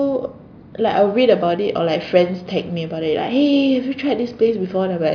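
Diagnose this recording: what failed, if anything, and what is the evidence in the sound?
Nothing failed in this speech recording, and the sound gives no evidence of any fault.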